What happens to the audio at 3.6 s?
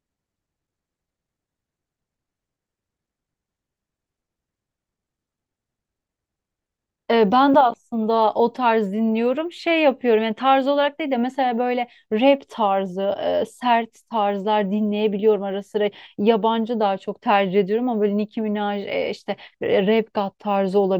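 At 3.6 s, as throughout the clip, the resampler restarts on every 10 ms block, converting each block without its neighbours, so every block edge carries a small error. The result is a 100 Hz buzz under the speech, present whenever there is signal.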